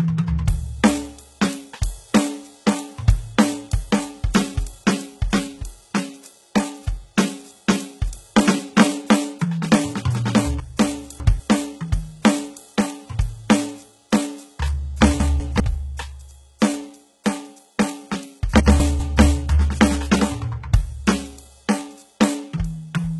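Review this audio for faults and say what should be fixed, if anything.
Throughout the music, the treble is synthetic, gritty and metallic with nothing above 11.8 kHz, likely HE-AAC compression at a very low bitrate, around 16 kbps, rebuilding highs by copying lower bands upward. Encode at a higher bitrate or with plain AAC.

Chunks out of order at 10.6–11.4 s, 15.2–15.6 s and 18.6–19.0 s: a 200 ms segment plays one to three positions late, leaving jumbled passages with hard joins. Buffer and reorder chunks by sequence number before playback or writing.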